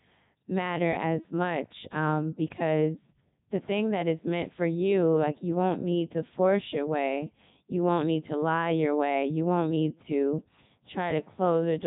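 A speech recording passed through the Codec 2 vocoder for its whole length. The voice sounds robotic and buzzy. The original waveform is gone. Only pitch, voicing, energy and a coarse spectral envelope survive, and the decoder rebuilds the sound from sine waves. The damage is heavy. Nothing remains above 3.8 kHz. The quality fits Codec 2's highest mode of about 3.2 kbit/s.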